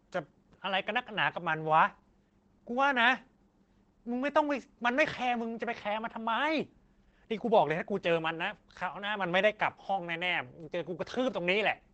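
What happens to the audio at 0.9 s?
At 0.9 s the speech carries Opus voice compression, present across the whole clip. Nothing sounds above 8.5 kHz. Coarse linear-prediction coding, fitting about 12 kbps, makes it muffled, hoarse and slightly robotic.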